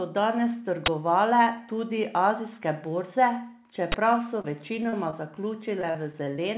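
At 0.86 to 0.88 s, and again at 3.92 to 3.94 s, there's a sharp, loud crack of digital noise. That's an uninitialised buffer: a block of about 20 ms got played before any audio was written into it, so whatever junk sat in memory came out as samples.

From 4.41 to 5.37 s, and again from 5.82 to 6.39 s, you get repeated packet loss with that robotic sound. Each stretch has six dropouts, about 120 ms missing in the first and 100 ms in the second, with the longest single gap around 31 ms and 37 ms respectively. Every hole gets papered over by stretching the last bit of sound, and then the next hole lands right after, so it comes out choppy and robotic. All of this rides on the narrowband G.711 call audio, which has nothing above 4 kHz.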